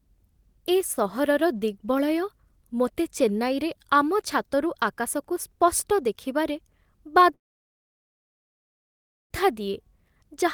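From 7.33 to 9.33 s there's a call audio freeze. The speech stalls and trails off into nearly two seconds of silence, then picks up exactly where it stopped with nothing lost, just pushed late. Likely delayed packets draining the jitter buffer.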